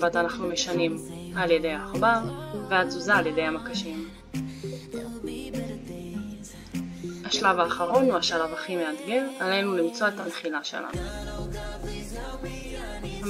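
The stream lost AAC frames three times, at 7.86 s, 10.20 s and 12.60 s, and each time the decoder covered the hole with AAC frame loss concealment. Each gap lasts about 42.7 ms, which fits one missing frame. The decoder rebuilt it from the previous good spectrum rather than going silent. Each dropout is a brief smeared, noisy or phasey patch where detail blurs, too short to fade out.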